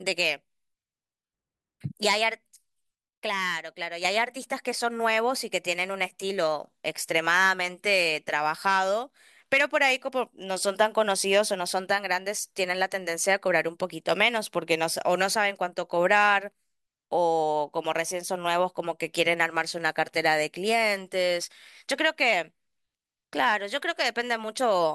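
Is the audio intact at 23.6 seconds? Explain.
Yes, the speech at 23.6 seconds is intact, with no dropout, click, distortion or other fault at that moment.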